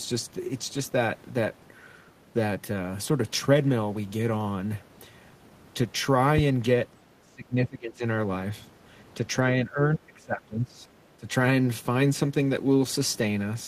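The speech in this clip drops sharply in level three times: from 7.19 to 8.04 s, from 9.61 to 10.81 s, and briefly from 11.17 to 11.28 s. The first two dips go down by roughly 20 dB and the last by roughly 15 dB. This is speech suppressed in double talk. The likely cause is an echo canceller that heard both ends talking at once, could not tell this talker from the far end's loudspeaker echo, and pulled the level down.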